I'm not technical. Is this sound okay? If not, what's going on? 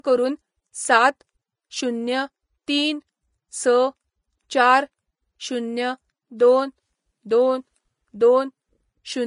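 No. The whole speech clip sounds hissy and grainy, with nothing above about 10.5 kHz, likely from heavy Vorbis compression. Unlike simple muffling, the remaining treble turns rough and noisy.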